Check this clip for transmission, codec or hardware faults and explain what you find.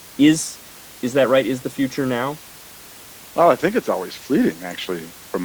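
The speech signal comes through intact, with the room's own background noise sitting about 23 dB beneath the voice as part of the recording itself.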